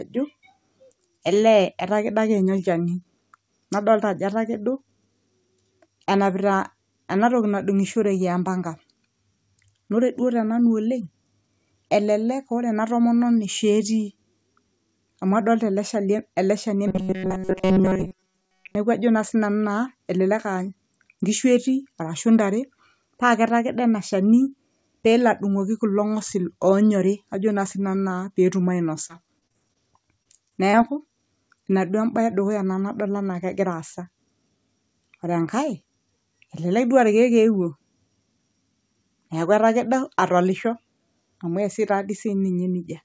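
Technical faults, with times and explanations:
16.88–18.75 s, robotic sound from repeated short buffers: audio likely arrived too seldom, so most of this stretch repeats about 5 ms chunks, forcing a metallic 188 Hz buzz.
29.08–29.77 s, repeated packet loss (robotic sound): about 100 ms went missing in several gaps, the longest 28 ms, each patched by extending sound, leaving choppy, robotic fragments.
30.23–30.27 s, 30.49–30.53 s, 30.71–30.75 s, short concealed packet loss: each time about 20 ms never arrived and was filled by continuing the previous sound, giving a brief smear or wobble.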